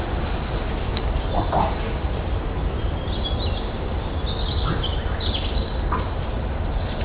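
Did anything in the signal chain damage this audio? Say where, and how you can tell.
Yes. Aliasing runs through the whole clip, from a sample-rate conversion that dropped 32 kHz to 8 kHz unfiltered. Energy above 4 kHz folds back to unrelated frequencies about 10 dB below the sound, turning it gritty and metallic. A filtered downsample would only sound dull, not crowded up to the 4 kHz edge.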